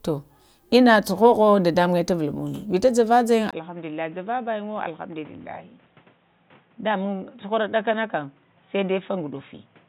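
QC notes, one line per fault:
3.51 s to end: input switched to a poorer device, likely. After a 20 ms gap the speech turns dull and boxy, with nothing above 3.8 kHz, the level drops by roughly 10 dB, and new background noise appears about 30 dB below the signal.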